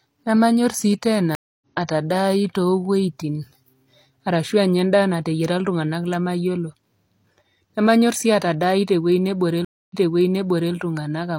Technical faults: stream reconnect

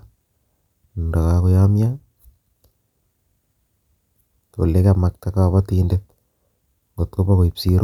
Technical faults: none

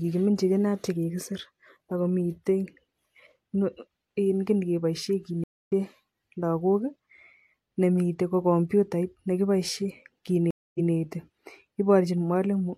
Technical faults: stream reconnect

